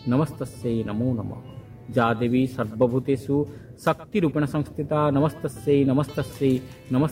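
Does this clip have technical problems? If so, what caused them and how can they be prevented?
No, nothing technical goes wrong in this one, so there's no fault to track down and nothing that needs preventing.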